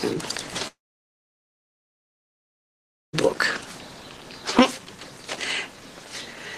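From 0.67 s to 3.15 s the sound trails off into a brief fading buzz, then roughly 2.4 s of silence before resuming further on, with about 2.5 s lost, a long network dropout, likely. Unlike a brief packet glitch, the concealment gives out and the audio skips ahead rather than pausing.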